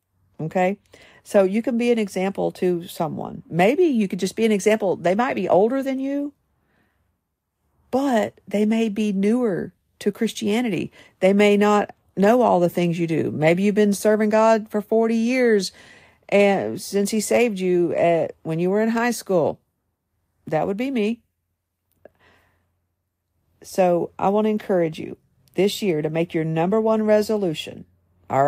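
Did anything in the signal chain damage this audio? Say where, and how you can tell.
No, nothing in the chain audibly damaged this speech recording at any stage.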